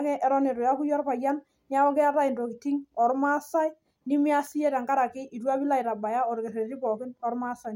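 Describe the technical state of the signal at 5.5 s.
At 5.5 s the speech signal is intact, with no dropout, clipping, glitch or other technical fault.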